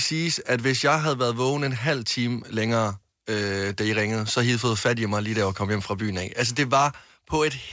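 No technical faults can be heard anywhere in this recording.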